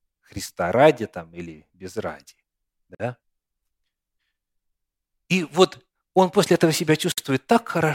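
Separately encoded pieces were joined without trimming encoder delay and end padding, leaving a gap at a join of encoded pieces at 2.95 s (50 ms) and at 7.12 s (59 ms), after "он после этого". The speech drops to silence with smeared edges, then resumes where it stopped.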